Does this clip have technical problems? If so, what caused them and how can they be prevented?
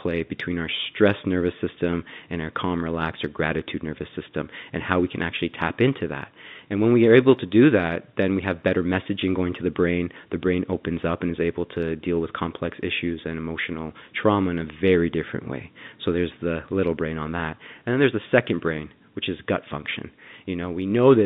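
No, there are no technical faults in this speech clip. It has the narrow sound of G.711 telephone coding, with the line band running from about 150 Hz to 3.7 kHz and nothing above it.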